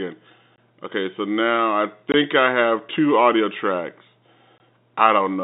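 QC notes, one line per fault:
0.56 s, 2.12 to 2.14 s, 4.58 s: packet loss filled with silence. Each gap lasts about 20 ms, which fits one lost packet. The second falls between "so now I" and "I have two audio". The third follows "have two audio tracks". The receiver substituted silence, so the gaps have hard edges against the narrow telephone-band G.711 audio.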